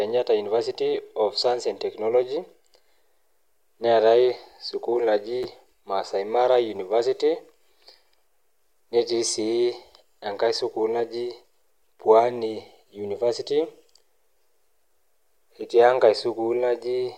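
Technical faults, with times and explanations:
5.43–5.45 s, chunks out of order: a brief jumbled flick in the speech, as one 10 ms chunk plays one chunk late, leaving hard joins.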